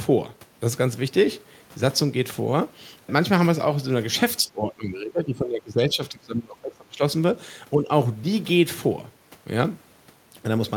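From 4.42 to 7.01 s the speech dips and breaks up in pieces, falling by as much as roughly 20 dB for around two seconds in total. A shorter, milder dip of about 5 dB follows between 7.74 and 7.89 s. This is speech suppressed in double talk. The likely cause is both sides talking at once, so the echo canceller could not separate this talker from the loudspeaker echo and turned both down.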